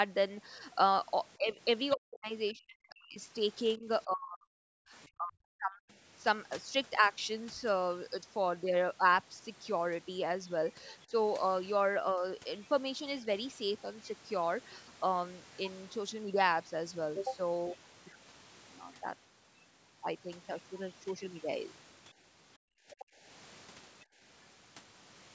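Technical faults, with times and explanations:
1.37 to 5.86 s, speech suppressed in double talk: the talker's level sags repeatedly across this span, about 3 seconds of it affected in total, with the deepest dip near 40 dB, enough to make stretches vanish. The likely cause is an echo canceller facing simultaneous talk from both ends; unable to tell the near voice from loudspeaker echo, it attenuates everything it hears. At 11.06 to 11.12 s and 12.15 to 12.23 s the same ducking recurs briefly, roughly 70 ms each, with shallower drops of about 10 dB and about 5 dB.
1.9 s, 10.9 s and 22.1 to 23.05 s, other side's voice leaking through: a faint second voice rides under the talker, very brief at the first two points and sustained for nearly a second at the last. It sits about 25, 30 and 20 dB below the speech respectively. This is likely far-end audio from the loudspeaker reaching the microphone and surviving incomplete echo cancellation, so residual echo slips into the outgoing signal.
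22.58 to 24.2 s, background gated by the echo canceller: the room tone drops away sharply, by about 37 dB at its deepest, for around 0.7 s in total within this window, then comes back. It coincides with the loudspeaker activity heard just before, as the canceller clamps the microphone hard while it believes echo is present and releases once playback stops, leaving audible holes in the ambience.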